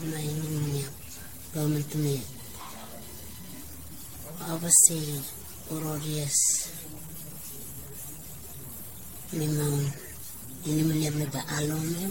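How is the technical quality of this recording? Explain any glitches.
The technical quality is poor, with two faults running through the entire speech recording.

Stuck bit: For the whole clip there is distortion, and the pauses are filled with noise. This is likely one converter data bit held at a fixed value, so about half the samples are offset by that bit's weight in a waveform-dependent pattern. Near silence, the bit flips with the sign of small values, which produces the noise floor.

Generation loss: Throughout, the sound is swirly, smeared and hollow, consonant attacks are blurred, and there is nothing above 16.6 kHz. This likely comes from about seven successive lossy encodes, consistent with AAC-LC near 64 kbit/s. Each pass requantises on a shifted frame grid, so noise and spectral holes accumulate.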